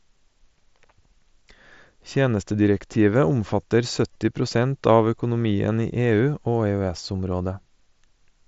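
Speech carried over a wideband Bluetooth headset link, with the band stopping near 8 kHz as expected from the mSBC codec, shows one instance of concealed Bluetooth headset packet loss from 4.13 to 4.15 s, just before "prosent av økonomien". For about 23 ms the receiver filled the gap by repeating the best-matching recent stretch of waveform, giving a brief buzzy, level-held tone and a small warble as real audio resumes. The duration fits roughly three lost packets.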